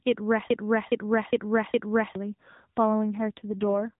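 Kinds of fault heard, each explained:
Broken-record loop: A 0.41 s fragment repeats four times back to back from 0.50 to 2.15 s, likely a stalled stream resending its last piece. The intended audio is lost.
AMR rate drop: From 3.14 to 3.94 s the narrowband speech turns rougher and more synthetic without a gap, which fits the mobile codec falling from 12.2 to 5.9 kbps.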